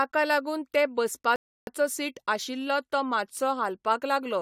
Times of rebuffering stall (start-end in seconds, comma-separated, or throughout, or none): 1.36-1.67